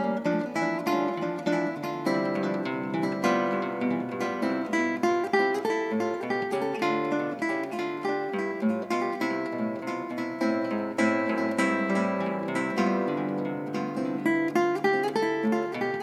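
From start to finish the sound is accompanied by a doubled audio track: a second, full-band copy trails the original by about a second, roughly 5 dB quieter, with no decay or room colouring, so everything is heard again like a dry, slightly softer repeat. The likely cause is a second capture through a slower path. On a spectrogram every event reappears as a slightly weaker duplicate shifted right by about a second; the waveform shows matching envelope shapes offset by that interval.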